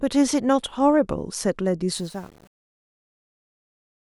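From 1.96 s to the end at 4.12 s, the fade-out of the speech shows truncation distortion on a fade. The level stage appears to drop low-order bits without dither, and the coarse steps fit roughly an 8-bit path. From 2.06 s on, the waveform collapses into a few square steps as it nears the smallest level. The tail turns gritty and buzzy instead of thinning out smoothly.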